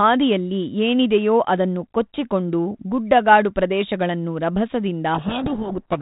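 At 5.14 s the two ends of the link stop agreeing on how the G.726 code words are packed: the bits within each word are read in the wrong order. This is a codec payload misread. The decoder keeps turning these valid-looking but scrambled values into audio, so from that point to the end of the clip the speech is buried under harsh, grinding distortion. Before this, the 32 kbit/s G.726 path is band-limited to telephone width, with only light coding roughness.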